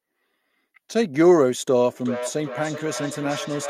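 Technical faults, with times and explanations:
2.01 s to the end, feedback howl: a tone near 500 Hz builds to about 11 dB below the speech, pulsing roughly every 400 ms. Unlike echo, the repeats grow instead of fading, because each microphone-to-loudspeaker trip adds level and narrows toward one frequency.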